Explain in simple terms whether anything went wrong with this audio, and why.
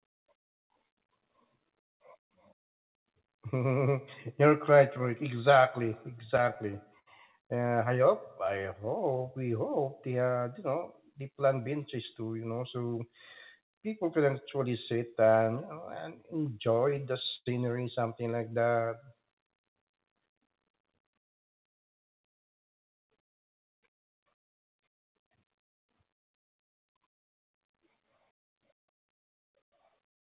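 A few hiccups from network timing, yes. First, repeated stalls (stutter) at 5.86 to 7.08 s and 16.74 to 17.48 s. Packets arrived late, so the speech keeps hanging on its last sound in short gaps of up to 92 ms. Nothing is actually lost.

Then a jitter buffer slow-down at 8.47 to 9.44 s, just before "hope they uh", and again at 18.38 to 19.27 s. The receiver stretched the speech to about 90 to 93% speed at the same pitch to rebuild its reserve.

Finally a jitter buffer speed-up at 11.42 to 12.43 s (107%) and at 21.15 to 26.11 s (104%). It trimmed small slices to cut extra delay, so the speech sounds a bit hurried. The whole thing also has that phone-line sound, with nothing above 4 kHz.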